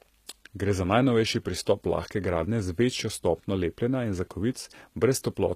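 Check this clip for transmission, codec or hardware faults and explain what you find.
One codec fault runs through the whole recording. From start to finish the speech carries HE-AAC compression damage, likely from spectral band replication at a low bitrate around 20 kbps. The upper band is rebuilt from copied lower bands, so sibilants sound gritty and metallic. A spectrogram shows smeared, repeated high-frequency texture and a hard ceiling at 14.9 kHz.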